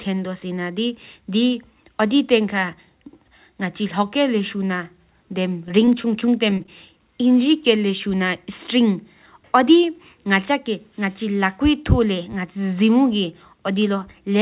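Repeated packet loss (robotic sound) runs from 5.67 to 6.68 s. Across that second, a rapid string of brief dropouts, none longer than 19 ms, is each bridged by extending the preceding sound. The speech turns choppy, with about an eighth of the stretch filled in. The whole call is band-limited to 4 kHz, which fits a narrowband G.711 telephone codec.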